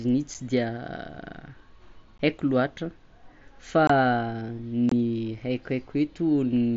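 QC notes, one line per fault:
0.34 s, 2.18 s, 3.87–3.90 s, 4.89–4.92 s, unconcealed Bluetooth headset packet loss: voice frames between headset and phone went missing with nothing filled in, leaving abrupt silent holes in the wideband mSBC speech, one 7.5 ms frame, then 15 ms, then two 22.5 ms gaps.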